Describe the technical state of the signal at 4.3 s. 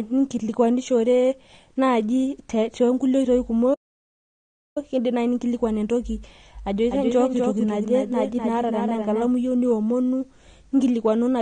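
At 4.3 s the signal sits inside a playback stall running from 3.74 to 4.78 s, about 1.02 s of dead silence. The waveform drops to a flat line and the spectrogram shows a blank vertical band before the speech resumes. The likely cause is a player starved of data or blocked until it recovered.

Underneath, the speech on either side carries AAC compression damage, plainly audible as a dull, smeared, warbling quality. The spectrogram shows a hard ceiling with nothing above 9.6 kHz, which likely fits AAC-LC at a low bitrate around 32 kbps.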